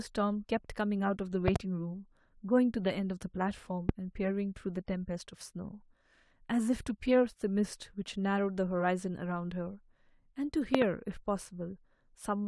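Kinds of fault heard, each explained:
Loud pop: sharp thumps about 20 to 25 dB above the speech, two doubled, likely from a voltage spike; isolated, unlike crackle, and the speech continues beneath.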